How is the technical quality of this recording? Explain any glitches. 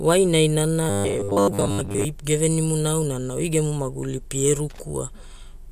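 The recording has two clear glitches in the speech.

From 0.90 to 2.06 s the voice turns into a rigid, metallic buzz fixed at 100 Hz, robotic sound from repeated short buffers. The likely cause is audio arriving too late, so playback keeps repeating the last 10 ms chunk, which sets the 100 Hz pitch, while most of the real audio in that stretch is skipped. Unlike plain dropouts there is no silence, and unlike a codec warble the buzz keeps one steady pitch while loosely tracking the speech.

From 4.70 to 4.82 s there is loose connector crackle: a short, irregular burst of scratching. A worn or dirty contact is making and breaking rapidly, chopping the signal and adding pops from any DC on the line. Its randomness sets it apart from the buzz earlier, which has a steady pitch.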